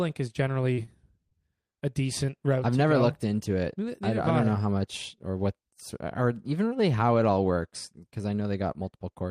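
At 0.73 to 0.79 s and again at 0.85 to 0.89 s, the speech has short concealed packet loss. About 40 ms, then 20 ms, arrived too late. The decoder extended the preceding sound to bridge each gap, leaving two quick smeared wobbles.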